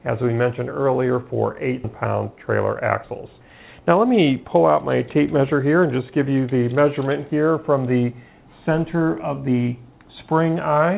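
At 1.84 to 1.86 s the audio lurches forward with no gap, as if nearly half a second has vanished and the two sides were butted together. This is a skip ahead: a stretch was dropped while later audio was already queued, closing the delay abruptly. From 2.84 to 3.41 s the sound runs about 8 percent fast yet keeps its pitch, giving a briefly rushed feel. That is jitter buffer speed-up, where the receiver trimmed a few pitch periods at a time, around 50 ms in all, to shed excess buffered delay. Throughout, nothing is heard above 4 kHz, consistent with a G.711 A-law call path at 64 kbps.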